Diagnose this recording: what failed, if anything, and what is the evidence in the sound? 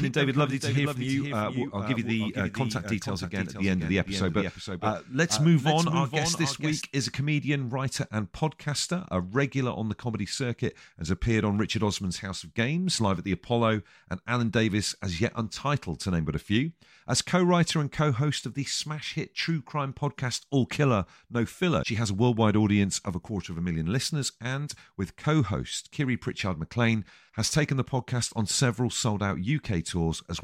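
From the start of the recording to 6.82 s, just before "is a comedian writer", the speech is heard twice: a second, somewhat quieter copy trails the original by about half a second, with the full bandwidth and none of the smear or room colour a real echo would add. It stops abruptly at 6.82 s. This is a doubled audio track, likely from the same signal reaching the mix through a second, slower capture path, or from an edit leaving two offset copies layered.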